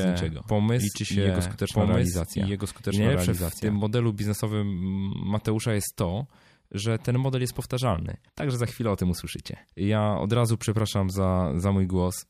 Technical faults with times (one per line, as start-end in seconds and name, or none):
0.00-3.76 doubled audio track